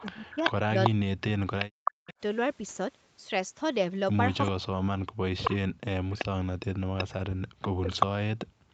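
A speech clip over a call link that's rough in a few ways, with everything sitting under an 8 kHz ceiling. There's an echo leak: a copy of the speech comes back about 381 ms late, roughly as loud as the original from the start to 2.14 s and again from 5.45 s to the end, plus a brief, quieter blip around 4.44 to 4.51 s. It's likely a speakerphone whose echo canceller didn't scrub its mic pickup. Overlapping that, there's speech suppressed in double talk: from 0.01 to 2.11 s and 4.51 to 8.25 s the talker dips and chops out, sometimes by roughly 40 dB, adding up to a few seconds in all. The likely cause is the canceller failing to separate the talker from the echo and turning both down. Finally, from 8.53 s to the end, the background is gated by the echo canceller, dropping about 40 dB for roughly 200 ms while the canceller clamps the mic.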